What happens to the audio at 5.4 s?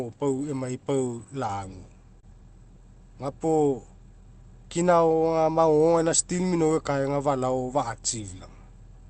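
Nothing goes wrong at 5.4 s: the speech there is intact, carried through the call path with its usual Opus coding and no fault at that point.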